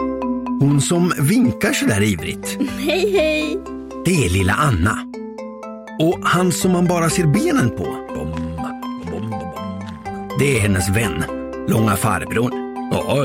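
Hard clipping at 0.61 to 2.10 s, 4.07 to 4.91 s, 6.01 to 7.66 s, 10.40 to 11.05 s and 11.71 to 12.40 s: the signal runs about 4 to 5 dB past what a stage can pass, so peaks are sliced flat, adding high harmonics heard as crackling fuzz on loud moments.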